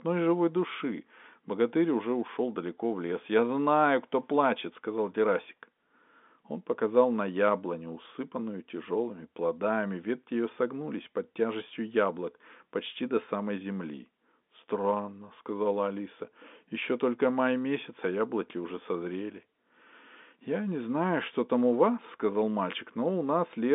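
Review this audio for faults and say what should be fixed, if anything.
No faults found; nothing needs fixing.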